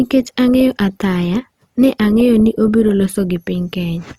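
Right from the start and all the way through, the speech has a rough, grainy texture, likely from Opus compression at a low rate, something in the region of 24 kbps. The top end is still there, so the bandwidth hasn't been narrowed, and it points to the music-style CELT mode: when bits run short, the encoder fills bands with folded or noise-like content instead of leaving holes. That's why you hear hiss-tinged, rough harmonics rather than swirling, and the damage is plainly audible.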